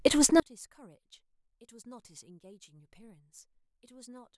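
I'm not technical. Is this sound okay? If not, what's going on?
No. From 0.4 s to the end, the speech almost vanishes, leaving only a faint trace. The likely cause is one channel inverted: one stereo side is flipped upside down, so when both sides are combined, the voice they share cancels itself out.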